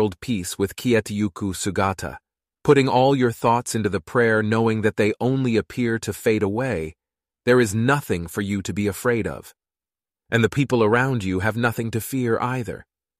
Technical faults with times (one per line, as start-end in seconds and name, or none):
none